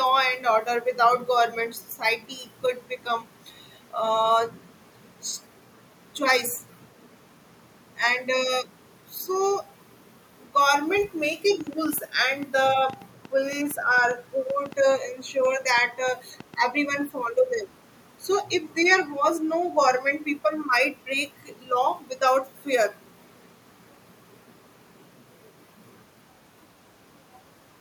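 From 11.61 to 16.55 s, a train of clicks ticks irregularly at 5.3 per second, likely interference; spectrogram shows thin vertical lines, waveform sharp spikes.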